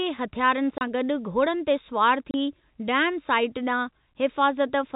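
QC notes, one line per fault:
0.78–0.81 s and 2.31–2.34 s, packet loss filled with silence: each gap is a clean 30 ms hole of silence, which fits one lost packet, with abrupt edges. Concealment would leave a smeared or repeated fill. The narrowband telephone sound is heard on both sides of each gap.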